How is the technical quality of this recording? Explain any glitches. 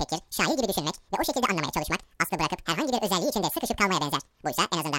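The recording has one fault throughout the whole clip.

Wrong sample rate: the speech runs twice as fast and a full octave (12 semitones) higher, consistent with audio captured near 22 kHz being played back at 44.1 kHz without conversion.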